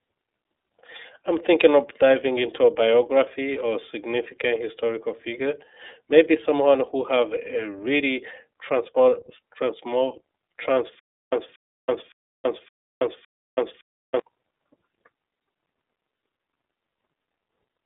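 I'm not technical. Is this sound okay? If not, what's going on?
No. Two problems are audible. Throughout the recording, the speech has passed through the iLBC codec, a phone-grade voice compressor. It keeps only the narrow telephone band, so nothing above about 3.8 kHz remains. That gives the muffled, boxy tone. The codec rebuilds the voice in small independent chunks, which leaves the speech plainly rough and slightly synthetic. It stays understandable but no longer sounds natural.

From 10.99 s to 14.19 s there is a stutter with silent gaps. A fragment of about 0.23 s plays, then about 0.33 s of dead silence follows, and the pattern repeats at a steady rhythm of roughly one cycle every 0.56 s, five times over. The likely cause is playback or streaming stalling and replaying its last bit of audio on each retry. The speech that should have filled those three seconds is missing.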